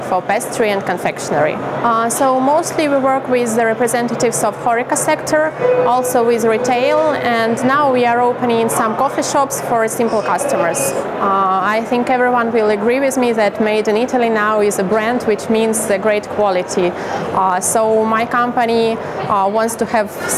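Gain pumping runs through the whole clip. The level swings by around 10 dB. The likely cause is input gain set far too high, with a fast limiter or compressor clamping down on each peak. Loud and quiet passages sit close together in level. The result sounds squashed and restless.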